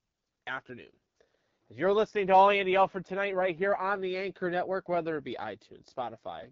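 The speech across the whole clip sounds rough and raspy, with a thin, hissy top that stops dead above about 7.4 kHz. That is AMR wideband (HD Voice) codec damage at one of its lowest rates, 8.85 kbit/s. The codec rebuilds the speech up to 6.4 kHz from a pulse-excited vocal tract model and fills the band just above with shaped noise. At this rate too few bits go to the pulses, so the excitation comes out coarse and grating.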